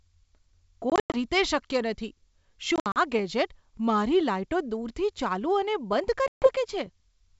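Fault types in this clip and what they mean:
Packet loss on an ADPCM call: chunks of the stream went missing and were filled with silence, so you hear abrupt holes, about 160, 120 and 140 ms of dropouts in three bursts near 0.9, 2.8 and 6.3 s, each around seven packets. Because the decoder's predictor and step size lose track of the sender, the sound comes back slightly distorted, like where it picks up at "ગેજેટ મારી", while the G.722 wideband coding underneath sounds clean.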